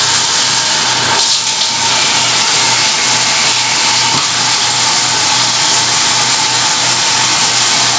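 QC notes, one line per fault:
Throughout, gain pumping: the background rises in the gaps and ducks by about 5 dB under each loud sound, flattening loud against soft, likely from input gain set far too high and a fast limiter clamping every peak; the call band stops near 8 kHz.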